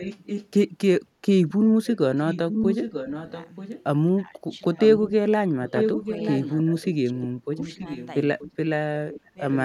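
Echo leak appears at 0.0–0.49 s and more strongly at 1.49–3.83 s. A quieter copy of the speech returns about 0.93 s late, likely because a far-end loudspeaker's echo canceller missed it. On a spectrogram it shows as duplicated harmonic patterns. Speech suppressed in double talk follows at 4.15–6.06 s, overlapping another echo leak at 4.78–5.12 s. The voice dips sharply in short pieces, likely because the canceller turned down both talkers. This leaves notches in the waveform and weaker patches on the spectrogram. Echo returns at 5.66–8.49 s. Further suppression comes at 7.04–7.51 s, the deepest drop, and at 8.50–9.39 s, then a faint final echo at 9.12–9.62 s.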